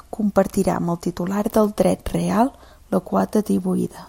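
No technical faults occur at any point, so there is nothing to describe in time order.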